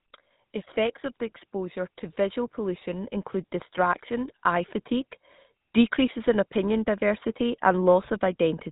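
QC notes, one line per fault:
throughout: GSM full-rate codec. The speech has a buzzy, gravelly roughness, and the top end is missing, with nothing above 3.8 kHz. The codec treats the vocal tract as a filter and drives it with a sparse, evenly spaced pulse excitation, keeping only a fraction of the original detail. That coarse rebuilding of the excitation causes the grit. The damage is plainly audible and fits a bitrate of about 13 kbps.
1.51–3.15 s and 3.75–5.23 s: automatic gain rising. In each span the speech and the background noise swell together, climbing about 4 dB over roughly one and a half seconds. The level control judged the input too quiet and raised its gain gradually, so the background is lifted along with the speech. The short stretch between the two rises shows that the control raised the gain again soon after the first rise.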